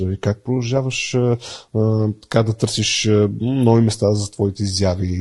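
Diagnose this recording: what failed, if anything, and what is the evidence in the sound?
The codec stage failed: low-delay AAC compression is plainly audible throughout the speech. The voice sounds rough and grainy, with noise filling between harmonics and a lowered or synthetic-sounding top band. This is likely from AAC-ELD's low-delay transform coding at a bitrate near 32 kbps.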